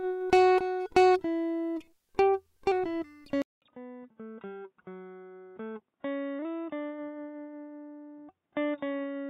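Music clip; at 3.42 s a 0.2 s silence precedes duller, roughly 10 dB quieter sound with a faint new noise floor and nothing above 3.8 kHz, likely an input switched to a poorer device.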